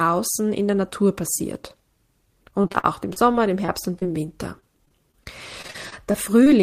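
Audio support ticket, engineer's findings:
Repeated packet loss (robotic sound), 2.51–4.08 s and 4.60–6.48 s: speech turns choppy with pieces missing in both spans, roughly a dozen short holes each, longest about 42 ms and 35 ms. Probable component: network jitter buffer, with concealment stretching the last fragment across each hole. Unlike one isolated dropout, the holes recur through each span, giving a repeated choppy texture rather than a single skip.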